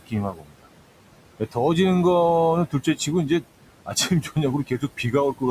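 Across the whole clip the background pumps: it sinks in the pauses and swells back under the talking. These are noise suppressor artifacts. The suppressor pulls down each band it judges to be steady noise by about 18 dB, frame by frame, so the room noise, sitting about 15 dB below the speech, comes and goes instead of holding still.

The same processing also eats into the speech itself. From 0.0 to 0.67 s the sound comes out swallowed and faint for close to half a second, dropping by about 19 dB at its deepest. Shorter dips follow at 2.67–3.08 s, 3.86–4.37 s and 4.67–5.13 s, each a fraction of a second where softer sounds fade out, by about 14 to 15 dB. This is speech cut by the noise suppressor: quiet parts of the speech were mistaken for noise and turned down with it.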